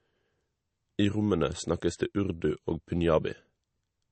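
From start to end, the speech has nothing above 8.3 kHz, with a watery, swirling texture on sibilants and smeared onsets. This is likely MP3 compression, where a starved encoder drops the treble and switches weak frequency lines on and off, pointing to roughly 35 kbps.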